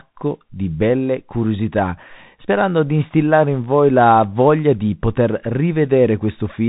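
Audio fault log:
Throughout: Bluetooth CVSD headset codec, plainly audible; nothing above 3.8 kHz survives, and the one-bit adaptive step fits a 64 kbps link, leaving granular hiss and scratchy s sounds.
2.99 to 3.03 s: wireless microphone noise hit, a short burst of static after "belle curiosità sperando di" and before "in voi la voglia", as the radio signal fades and receiver noise rises.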